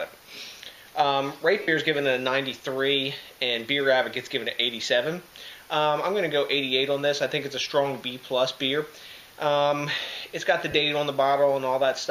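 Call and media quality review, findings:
Lost LE Audio frames, 1.62–1.68 s: about 60 ms of audio missing on the Bluetooth LE link. The LC3 decoder's concealment repeats the last good spectrum with randomised signs, so the sound turns into a brief noisy smear. The gap length fits eight 7.5 ms frames.

Lost LE Audio frames, 10.71–10.74 s: about 30 ms lost, same mechanism. It produces a shorter smeared patch. The length points to four frames.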